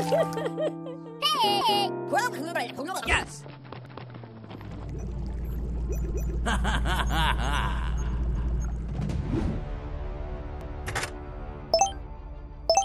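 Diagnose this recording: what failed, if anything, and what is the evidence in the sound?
Overlapping chunks at 1.61, 3.86, 6.11, 8.36 and 10.61 s. At each join a 250 ms stretch of audio plays twice, giving a regular stutter. This points to a chunked processing or buffer stage in which each 2.0 s chunk starts before the previous one ended.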